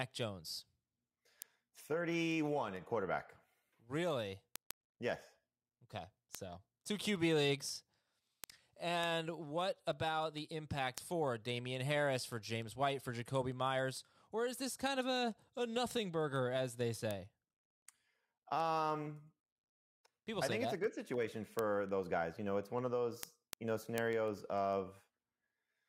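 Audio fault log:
0.23–25.78 s, word clock ticks: there's a steady patter of sharp little ticks right through the speech, one roughly every 0.15 s, so around 150 of them. The receiving end is free-running instead of locking to the sender's clock, and the two drift apart by something on the order of 150 parts per million. Each time they slip past each other a sample gets dropped or doubled, which fits a single-sample slip, and that discontinuity is the click you hear.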